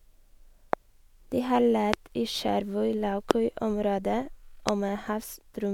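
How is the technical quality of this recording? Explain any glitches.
The recording has four loud pops, at 0.73 to 0.75 s, 1.94 to 1.96 s, 3.31 to 3.33 s and 4.69 to 4.71 s. Each is a single sharp crack about 20 ms long, roughly 20 to 25 dB louder than the speech, which carries on underneath. The likely cause is a sudden voltage spike from static, a switch or a driver glitch, added to the signal and shaped by the circuits after it.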